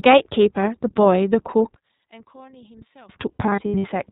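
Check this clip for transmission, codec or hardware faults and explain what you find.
Three faults are present in this speech clip. One runs throughout and two are confined to specific stretches.

Throughout, iLBC codec damage is plainly audible. Nothing above 4 kHz survives, and each 20 ms frame is coded independently, which gives the speech a rough, synthetic edge consistent with iLBC's 15.2 kbps mode.

From 1.74 to 3.09 s, the level drops by about 25 dB. One channel was likely inverted, so the shared content cancelled when the channels were summed to mono.

From 3.32 to 3.85 s, lost iLBC frames total 280 ms, scattered in runs of up to roughly 70 ms. The decoder filled each gap with repeated pitch cycles and noise, producing brief buzzy held-vowel patches before clean recovery.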